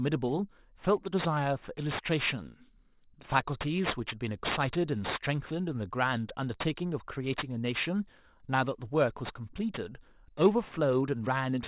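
Aliasing runs through the whole speech clip. The rate was cut, which fits a drop from 24 kHz to 8 kHz, without a filter first. Energy above 4 kHz folds back down as false tones, only about 10 dB under the speech. Sibilants sound gritty and metallic.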